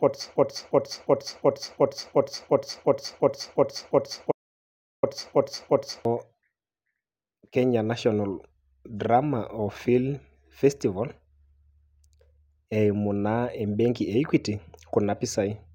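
From the start until 6.05 s, a broken-record loop repeats one 0.36 s fragment back to back, sixteen times. A stalled player or stream likely kept resending it. From 4.32 to 5.03 s, an audio dropout to silence cuts in. For 0.71 s there is total silence, with no room tone, likely from lost input.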